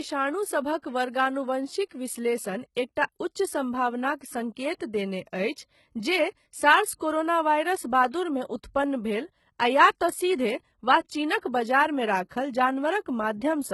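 Speech recorded here carries heavy codec damage from start to finish: the treble has a rebuilt, gritty, lispy quality on s sounds, and a spectrogram shows a hard ceiling with nothing above 11.8 kHz plus smeared, repeated-looking high bands. This points to a very low bitrate around 16 kbps, likely HE-AAC compression with spectral band replication. From 0.14 s to 13.71 s, clock slip clicks recur roughly every 40 ms, some three hundred in all, as single-sample jumps heard as a regular tick or soft rattle, showing on a waveform as tiny steps in the signal and on a spectrogram as evenly spaced thin vertical lines. These fit an error of around 500 ppm between two unsynchronised clocks. Pre-echo appears before attacks from 1.85 to 1.91 s (58 ms), at 2.75 s (17 ms), from 5.53 to 5.57 s (41 ms) and from 11.39 to 11.43 s (36 ms). Each shows as a short hiss that softens the onset, and on a spectrogram as a broadband smear reaching back before the attack, because the transform codec spread its noise across the whole block.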